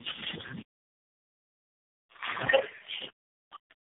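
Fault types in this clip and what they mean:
tandem speech coding: rough, muffled, warbly speech with nothing above 3.6 kHz, fitting three low-rate speech codecs in series, each re-coding the last one's degraded output.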